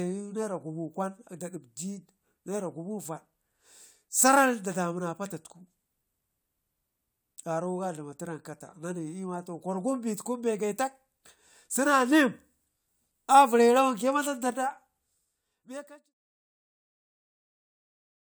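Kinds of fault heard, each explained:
No faults heard in this speech.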